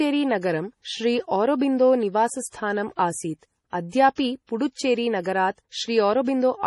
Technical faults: MP3 compression; pre-echo

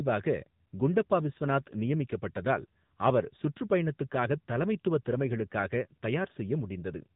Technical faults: AMR narrowband mobile codec

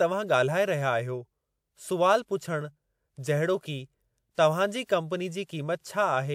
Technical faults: pre-echo

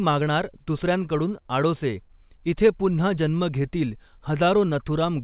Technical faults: clock drift between sender and receiver; repeated timing corrections

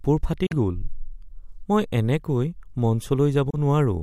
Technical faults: Bluetooth dropout

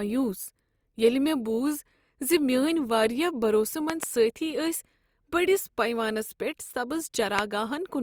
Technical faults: loud pop

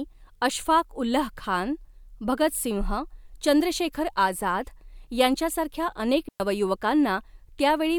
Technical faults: digital wireless dropout

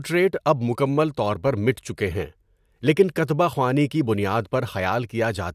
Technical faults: none

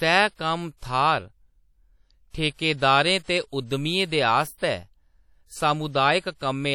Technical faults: WMA compression

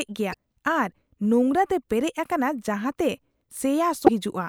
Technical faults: damaged data in a compressed stream

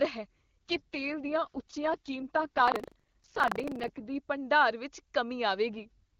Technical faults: AMR rate drop; buffer tearing

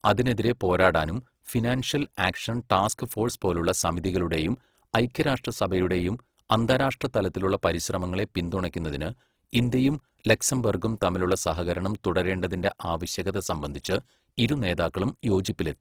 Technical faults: Opus compression

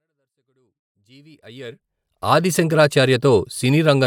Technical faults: none

